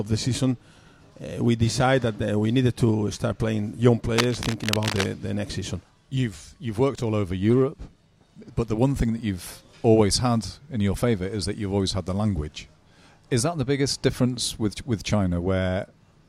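From 4.18 to 5.06 s a dense, uneven scratching and rustling sits over the sound, only a little quieter than it. This is cable scratch noise, likely from a worn cable or connector being moved so its contact resistance fluctuated rapidly.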